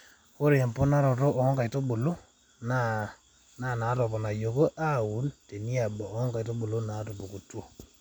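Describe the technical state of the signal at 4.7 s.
Nothing is wrong with the signal at 4.7 s: the speech there comes through intact, with no audible fault at that moment.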